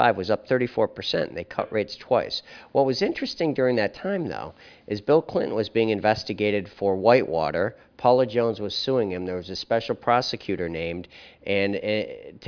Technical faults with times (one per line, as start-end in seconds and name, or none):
none